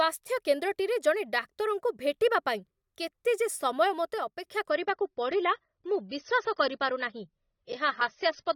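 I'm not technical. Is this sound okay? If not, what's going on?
No. From 4.18 to 4.44 s the volume suddenly drops to a noticeably quieter level and background noise drops with it, then returns. This is likely a sudden gain jump, where a volume setting changed instantly instead of being eased in gradually.

From 4.70 s to the end, the adaptive stream is playing at a lower bitrate. The connection slowed, so the player switched to a smaller, lower-quality version of the audio without pausing. The speech loses its crispness and sounds duller and muffled, with nothing above about 6.3 kHz.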